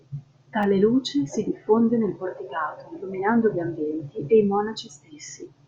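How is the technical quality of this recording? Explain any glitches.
One glitch mars the speech. At 0.63 s there is a repeated buffer: a 5 ms block arrived late, so the device played the previous one twice more. Three identical 5 ms pieces, each with a hard join, recur at 200 Hz, giving a tiny buzz rather than the single click of a dropout, and no audio seems lost.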